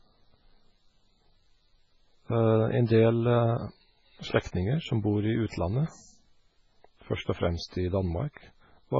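MP3 compression runs through the entire recording. The audio has nothing above 7.6 kHz and a heavy watery, swirling texture. This sounds like a likely MP3 encode at a very low bitrate, around 16 kbps. Starved of bits, the encoder cuts the treble at a fixed point and drops weaker frequency lines, which then flicker in and out between frames. The result is a thin, bubbling sound, and the s sounds turn metallic and chirpy.

Pre-echo appears from 5.49 to 5.53 s, where a brief hiss of about 32 ms leads into a sharp attack in the speech. The codec spreads its quantisation noise across a whole block, and because this attack lands late in the block, noise sized for the loud onset spills into the quiet just before it. The hiss arrives early, and the attack sounds blunted and smeared.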